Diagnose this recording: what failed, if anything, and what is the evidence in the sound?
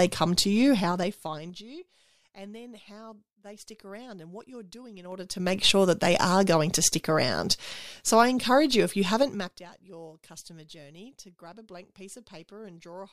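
The gain stage is stepping the level instead of ramping it, so you get zipper noise. From 0.74 to 1.67 s the speech drops by roughly 25 dB, at about ten steps a second. From 5.02 to 5.57 s it climbs back by roughly 25 dB, and from 9.20 to 9.66 s it drops again, both at around fifteen steps a second. Each step is 3 dB with no smoothing between steps, so every jump clicks and the clicks run together into a ticking zip over the fade.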